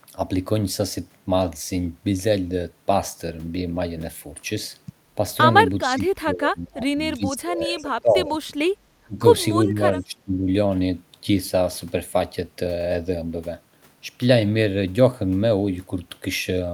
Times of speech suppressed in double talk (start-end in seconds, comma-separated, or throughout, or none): 5.81-8.32, 9.02-9.24, 9.65-10.47